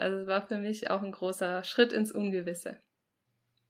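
No technical faults are audible.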